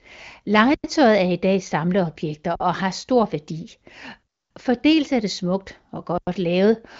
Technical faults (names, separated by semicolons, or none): underrun with held sample